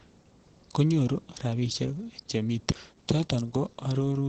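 Speech, with Opus voice compression running the whole way through: nothing reaches above about 8.7 kHz, so it's band-limited to wideband, and the coarse SILK excitation coding leaves it muffled, a bit hoarse and faintly robotic. That plainly audible damage fits a low bitrate around 12 kbps.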